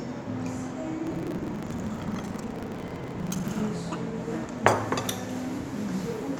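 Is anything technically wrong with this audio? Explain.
Yes. From 1.04 to 3.61 s there is buffer tearing: writer and reader have slipped, so about a third of every 40 ms buffer replays audio roughly 150 ms old, giving a 25 Hz rattle. The waveform shows hard steps at each join, and the spectrogram shows vertical stripes at 25 Hz.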